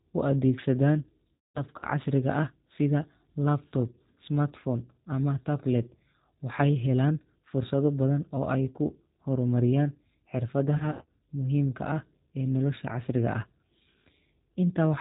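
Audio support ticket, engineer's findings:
G.729 codec, whole clip. Speech band-limited, nothing above 4 kHz. Rough, slightly synthetic texture, codec damage plainly audible. Sound fits the 8 kbit/s G.729A variant. Mechanism: speech rebuilt from a vocal tract filter, pitch predictor and a few pulses per frame, so fine detail and breathiness are lost. Component: VoIP endpoint or gateway codec selection.

VoIP packet loss concealed by the speech codec, 1.34 to 1.85 s. About 240 ms lost, scattered over 480 ms, longest gap 210 ms. Speech smears into a buzzy tone or coloured noise that fades. Likely network loss on the RTP path. Decoder extrapolates from last pitch and filter, reducing gain each frame. Voice stays weak briefly after recovery.

Same fault, 10.77 to 11.19 s. About 180 ms lost over 420 ms, longest gap 90 ms. Shorter dropouts, voice stays weak briefly after recovery.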